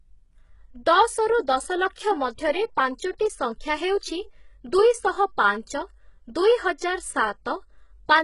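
Across the whole speech clip the treble sounds synthetic: sibilants come out gritty and lispy, with a metallic sheen that doesn't sit with the lower voice, and nothing is present above 11 kHz. This is likely HE-AAC compression, where the upper band is rebuilt by copying lower bands upward. The heavy damage fits a very low bitrate around 12 kbps. On a spectrogram the top band looks like smeared, repeated copies of lower harmonics, with a hard ceiling at 11 kHz.

At 1.95 to 1.98 s a sharp onset is preceded by pre-echo, a short hiss about 28 ms long, and the attack itself sounds softened. The codec spread noise meant for the loud transient across its whole block, filling the quiet moment just before it. A second, briefer pre-echo of about 13 ms occurs at 2.98 s. In the waveform, low-level noise rises just ahead of each attack. On a spectrogram, a broadband haze smears backward in time before the transient.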